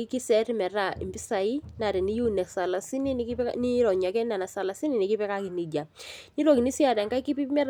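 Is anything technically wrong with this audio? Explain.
No, there are no faults.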